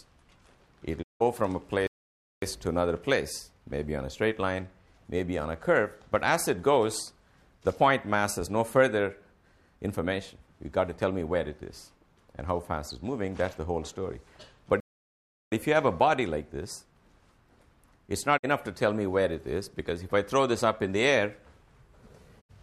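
At 1.01 s the sound fades to silence for about 0.2 s, a digital broadcast dropout where the receiver muted on bad frames. Then 1.87 to 2.42 s and 14.80 to 15.52 s go silent mid-flow, likely a playback stall from the player starving for data. Shorter dropouts return at 18.36 s and 22.40 s.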